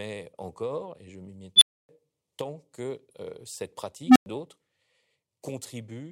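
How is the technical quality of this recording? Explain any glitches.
The recording has two glitches, both from an unstable filter.

At 1.56 to 1.89 s, after "encore et je m'y", a recursive filter's output runs away. A tone of roughly 4 kHz swells to clipping in 54 ms, then overflow drops the audio into 276 ms of silence before "tant que cette".

At 4.05 to 4.26 s, after "tant que cette", the same happens with a hum of roughly 300 Hz. It builds over 111 ms, then goes silent for 103 ms.

Unlike acoustic feedback howl, neither tone sustains. Each ends abruptly in dead silence.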